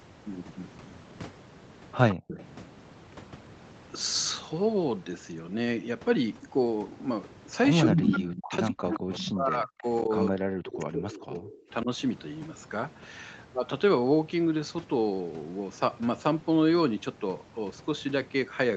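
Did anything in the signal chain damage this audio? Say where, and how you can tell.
Yes. Echo leak in call processing: a copy of the speech 167 ms late, about 15 dB down, at 2.1–2.45, 8.93–9.18 and 10.68–11.57 s, and as loud as the speech at 7.81–8.39 s. The likely cause is incomplete echo cancellation.

Background gated by the echo canceller: at 2.15–2.28 s the room sound drops by about 40 dB for roughly 150 ms, then returns as the canceller releases.

Speech suppressed in double talk, with the echo canceller the likely cause: from 7.86 to 11.89 s the talker dips by up to about 40 dB or cuts out, for about 3 s in total.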